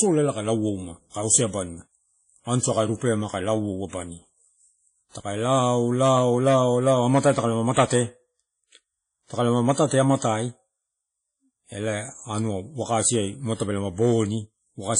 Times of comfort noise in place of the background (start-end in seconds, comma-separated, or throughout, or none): none